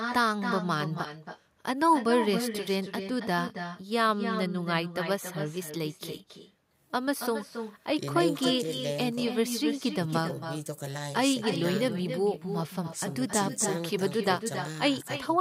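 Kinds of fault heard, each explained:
Echo with no canceller: the far end is playing this speech over a loudspeaker, its microphone picks it up, and nothing strips it out before it returns, so every phrase is followed about a third of a second later by a copy about 8 dB quieter and thinner. Unlike room reverberation, which smears sound into a continuous tail, this is a distinct delayed repeat that is heard as a separate shadow of each phrase, and it persists through the whole clip.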